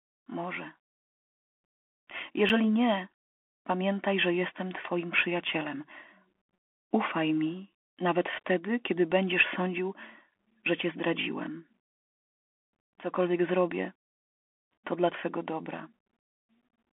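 From start to end the speech sounds narrow and boxy, with nothing above about 3.8 kHz, scratchy s sounds and a granular hiss beneath. This is the Bluetooth CVSD headset codec, whose one-bit up-or-down coding, consistent with a 64 kbps stream, distorts clearly here.

A hard-edged hole of about 7 ms falls at 2.49 s, just before "nie pamiętaj że jestem", and another at 10.51 s, between "wtedy kiedy będziesz sądził" and "że cię zdradziłem". Each is a gap between chunks: audio handled in 4.0 s blocks, with silence inserted at the joins.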